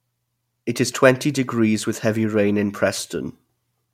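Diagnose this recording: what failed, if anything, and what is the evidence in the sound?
Nothing failed; no fault is audible in this speech.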